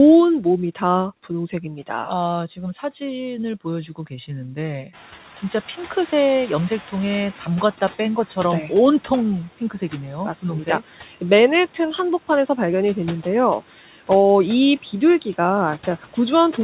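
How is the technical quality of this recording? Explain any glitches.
Two noise-suppression glitches stand out, one near 5 seconds and one near 14. The audio comes through a narrowband call path with nothing above 4 kHz, which fits G.711-style telephone coding. The room noise jumps by about 20 dB at roughly 5 s.

Noise suppressor catching up, 4.93 to 7.37 s: When the background noise jumps, the suppressor is still working from its old, quieter noise estimate. It takes about 2.44 s to adapt. Until then the louder noise passes through with little reduction, and then it settles down by about 8 dB as the estimate catches up. You hear a burst of background noise that fades back over a couple of seconds rather than being trimmed right away.

Speech cut by the noise suppressor, 13.61 to 13.87 s: Here the suppressor mistakes part of the speech for background and turns it down along with the noise, by up to about 9 dB. 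Only around a tenth of a second within that window is actually affected. That bit sounds swallowed or faint, like a soft sound or word ending briefly ducking out.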